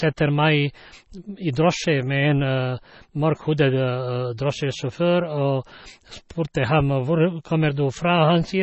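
From start to finish the speech carries heavy damage typical of MP3 compression, likely from a low bitrate around 24 kbps. Nothing sounds above 8 kHz, and weak frequency components drop in and out between frames, giving a watery, swirling texture, chirpy sibilants and smeared onsets.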